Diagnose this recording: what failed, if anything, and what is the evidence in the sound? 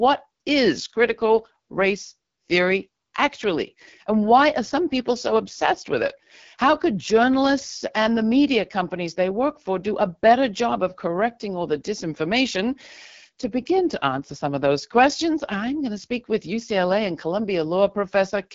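The codec stage is at fault: this speech has gone through the AMR wideband (HD Voice) codec for the whole clip. There's nothing above about 7.4 kHz, and the top band sounds like filled-in noise rather than real detail. Voiced sounds come out rough and raspy, which fits one of the two lowest modes, around 8.85 kbit/s. At that rate the pulse-driven vocal tract model can't track the waveform closely, so the damage is plainly audible.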